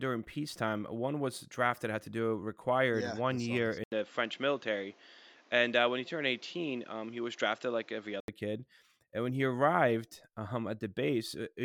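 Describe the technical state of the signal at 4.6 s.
At 4.6 s you're in the dull stretch from 3.84 to 8.28 s, likely the input switched to a poorer device: nothing above 7.6 kHz, an 80 ms gap at the switch, and fresh noise.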